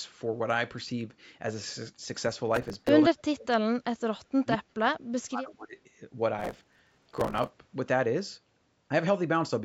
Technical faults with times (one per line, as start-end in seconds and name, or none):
2.56-2.89 processor overload crackle
3.09-4.64 speech suppressed in double talk
4.99-5.77 speech suppressed in double talk
6.39-7.47 processor overload crackle